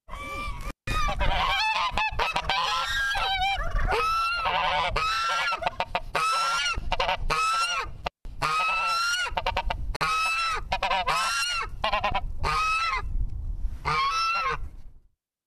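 Everyday sound recording with two intermittent-contact dropouts, at 0.61–0.95 s and 7.98–8.27 s, where a loose connection opens for about 170 ms. Each appears as a crackle spike, then a near-flat waveform with faint hiss. At 9.96–10.01 s a 48 ms gap at a join of separately encoded pieces leaves untrimmed encoder delay and padding, a slightly smeared vertical blank band on the spectrogram.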